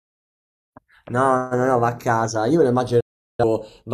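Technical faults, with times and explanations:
Throughout: channels drifting apart, heard as slow flanging in mono, because clocks differing by around 70 ppm let the delay between channels creep to a fraction of a millisecond.
3.0 to 3.43 s: digital broadcast dropout. The sound fades out in 8 ms and stays silent for 384 ms while the receiver mutes lost or corrupt frames.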